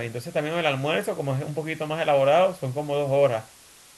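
A steady, even hiss sits under the speech from start to finish, roughly 25 dB down. This is low bit depth with dither, consistent with about 7-bit quantisation, which turns rounding error into constant white noise instead of distortion.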